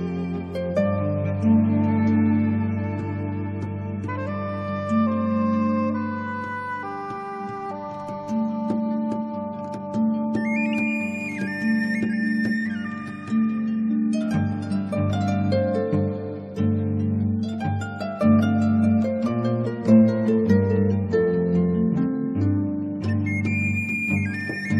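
No dropouts, distortion, noise bursts, level jumps or timing glitches can be heard anywhere in the audio, so the signal shows nothing that needs fixing.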